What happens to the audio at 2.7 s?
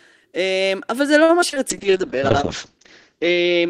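At 2.7 s the speech sits inside a call bitrate drop that begins at 1.71 s and lasts to the end of the clip. The bandwidth estimate fell, so the encoder had to code with far fewer bits, going from 32 kbps down to 7 kbps. It also narrowed the audio band from 20 kHz to 8 kHz. The speech sounds rough and muffled, with the top end gone. The lowest rate holds for about 1.4 s.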